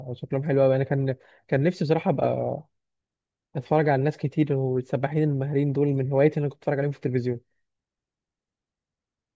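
No technical faults can be heard anywhere in the recording; the speech signal stays intact and continuous throughout.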